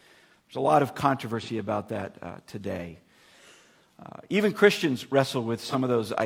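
AAC frame loss with concealment at 1.41–1.49 s and 5.62–5.75 s: each gap fits one missing 42.7 ms frame, patched from prior spectrum, giving a brief smeared, phasey blur.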